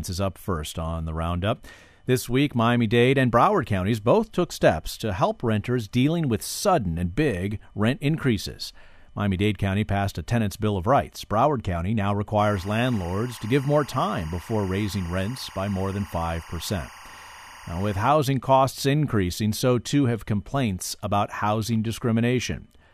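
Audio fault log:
12.39–18.09 s, timecode bleed: a steady chirping warble sits behind the speech, about 20 dB below it, ending just before "costs increasing so too". That's linear timecode leaking in from a neighbouring track or cable, flipping between roughly 1 and 2 kHz, consistent with 23.976 fps code.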